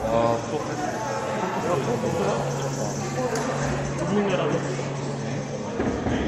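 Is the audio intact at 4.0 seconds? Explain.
Yes, the audio at 4.0 seconds is intact, with no dropout, click, distortion or other fault at that moment.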